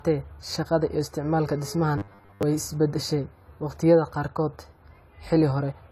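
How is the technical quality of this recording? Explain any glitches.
The recording has two audible problems: a dull, smeared coding character across the whole speech clip, and a short robotic burst near the two-second mark.

Throughout, the audio sounds dull and watery, with fizzy sibilants and warbling on sustained sounds. This is likely AAC compression at a low bitrate, around 32 kbps. The encoder quantises its frequency lines coarsely against a hearing model, so detail is discarded and bands are smeared or holed. On a spectrogram, the upper bands look patchy rather than continuous.

From 1.98 to 2.43 s, just before "is beddeshay waqtiyada", the speech turns into a rigid, metallic buzz at 100 Hz. This is likely robotic sound from repeated short buffers. New audio arrives too late, so a fragment of about 10 ms keeps replaying while most of the real signal in that stretch is skipped. The waveform shows the same small shape repeating, and a spectrogram shows evenly spaced harmonics stacked on 100 Hz.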